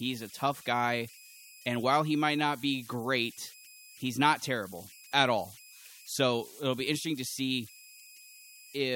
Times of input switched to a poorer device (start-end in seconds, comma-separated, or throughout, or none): none